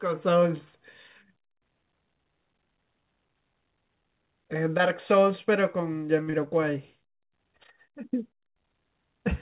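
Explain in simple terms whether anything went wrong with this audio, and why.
Two small glitches land back to back around 6.2 s, heard through a narrow phone-style sound with nothing above 4 kHz. First, at 6.23 to 6.30 s, there's a short stall from a late packet: a piece of audio arrived late, so the receiver held the last sound for about 38 ms until it caught up. Nothing is lost there, but that moment drags a little. Right after, from 6.30 to 6.36 s, comes a short concealed packet loss: about 30 ms of sound never arrived in time, and the receiver patched the gap by continuing the previous sound, leaving a brief smear.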